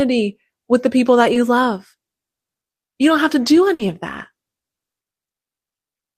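At 1.33 to 1.37 s, a short concealed packet loss: about 20 ms never arrived, so the receiver stretched the preceding speech across the hole, leaving a brief smear. At 3.73 to 3.81 s, a burst of packet loss: about 60 ms went missing, and concealment held and faded the last sound before speech resumes further on.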